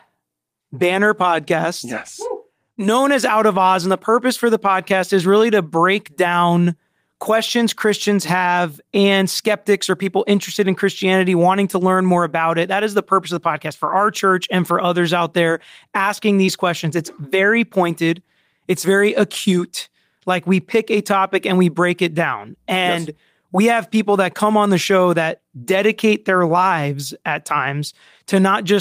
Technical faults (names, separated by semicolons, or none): short concealed packet loss